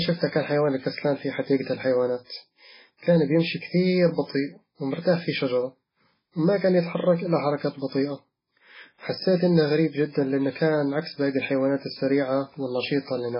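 Watery, swirly speech with no treble above about 5.3 kHz throughout, likely MP3 compression starved of bits, pointing to a very low bitrate around 16 kbps.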